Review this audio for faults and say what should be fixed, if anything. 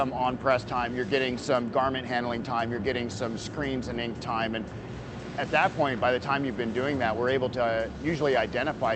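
Nothing needs fixing: the signal carries the ordinary character of a call path, with the top end rolling off around 8 kHz and the usual coding texture that fits Opus at about 32 kbps, and no faults are present.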